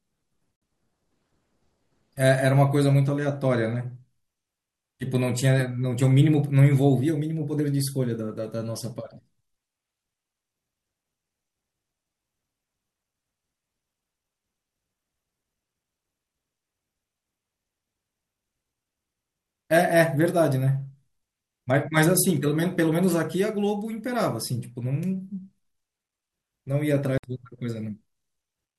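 At 0.56 s and again at 27.18 s, the speech cuts to silence for about 56 ms and picks up further along as though it had kept playing through the gap. Both holes have the length and shape of a Bluetooth dropout, likely caused by audio packets arriving at the headphones too late and being discarded. A gap of this size fits roughly three lost packets each time.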